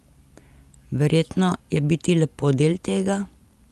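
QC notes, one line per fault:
No faults to note for QC in this speech clip.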